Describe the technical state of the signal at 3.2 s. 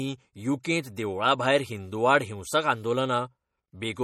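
MP3 compression at 3.2 s, and across the whole clip rather than just this moment: the speech has a plainly audible watery, swirling quality, with s sounds turning metallic and chirpy and consonant attacks smeared. The likely cause is an encoder starved of bits, which fits a low bitrate around 48 kbps, zeroing weak frequency lines that flicker on and off between frames. Content still reaches about 20.1 kHz.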